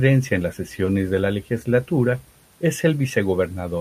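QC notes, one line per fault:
0.85 to 0.88 s, short concealed packet loss: 20 ms of speech never arrived and was rebuilt from the preceding sound, giving a brief smear rather than the silent gap of a dropout.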